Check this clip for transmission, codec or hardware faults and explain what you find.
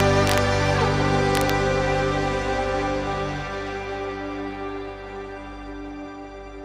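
Violent, harsh cracks hit the loud passages from 0.00 to 0.38 s and again from 1.35 to 1.50 s. This is integer overflow: peaks driven about 2 dB and about 1 dB past the integer limit wrap to the opposite sign instead of being limited, snapping across the full range.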